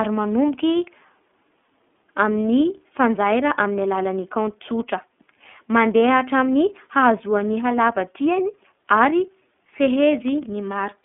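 Speech clip squeezed through the iLBC codec the whole way: the band stops around 3.7 kHz with the line sitting near 200 Hz to 3.5 kHz, and there's a plainly audible rough, synthetic edge from frame-by-frame excitation coding, which fits the 13.33 kbps, 30 ms frame mode.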